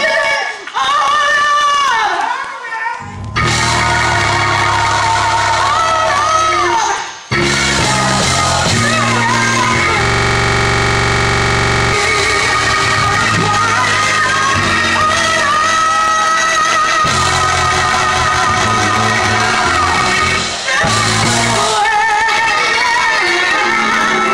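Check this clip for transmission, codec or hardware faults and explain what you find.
A system hang loop runs from 10.05 to 11.93 s. The machine froze while the audio hardware kept replaying one 42.67 ms slice of its ring buffer, which fits a 2048-sample buffer. That slice repeats dozens of times at 23.4 Hz, heard as a rapid, rattling buzz.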